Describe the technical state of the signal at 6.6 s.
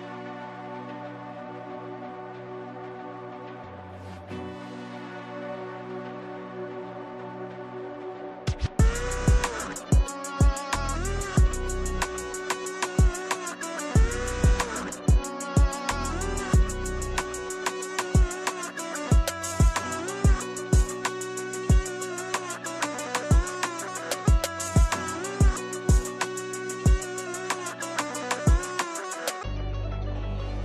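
At 6.6 s the signal is intact, with no audible dropout, distortion or other technical fault at that point.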